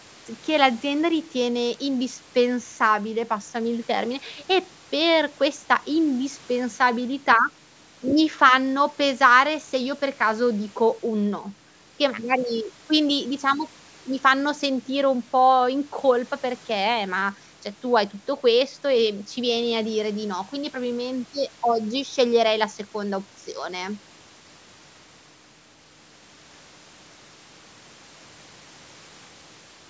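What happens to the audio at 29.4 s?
Nothing goes wrong at 29.4 s: the speech carries on intact there, with only the normal band-limiting of call microphone processing.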